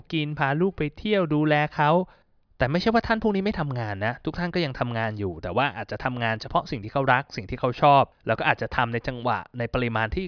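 No technical faults can be heard anywhere in the recording. The speech runs without any break, jump or disturbance to mark.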